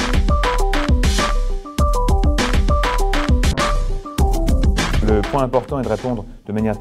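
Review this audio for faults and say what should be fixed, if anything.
A call bitrate drop runs from 3.53 to 5.17 s: the sound turns coarse, watery and muffled, consistent with encoding falling from 96 to 12 kbps, then clears without dropouts, unlike packet loss. To prevent it, set a higher minimum encoder bitrate and smooth bandwidth-estimate changes.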